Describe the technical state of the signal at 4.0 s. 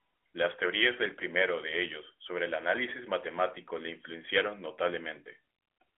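At 4.0 s the signal is intact, with no fault present; the speech simply carries the narrow telephone band of the AMR narrowband mobile codec path it travelled through.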